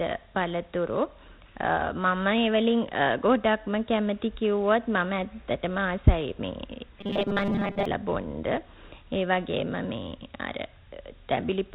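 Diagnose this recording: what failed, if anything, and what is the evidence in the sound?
The codec stage shows Dialogic VOX ADPCM damage throughout. Nothing reaches above 4 kHz, and a plainly audible gritty hiss trails the speech. That fits 4-bit ADPCM at 32 kbps, which implies 8,000 samples a second, with coarse step adaptation leaving quantisation noise behind each syllable.

From 7.01 to 7.85 s the speech turns into robotic sound from repeated short buffers, a rigid metallic buzz at 200 Hz that only loosely tracks the words. The likely cause is a buffer underrun at the driver or buffer stage, repeating about 5 ms blocks and skipping most of the real audio.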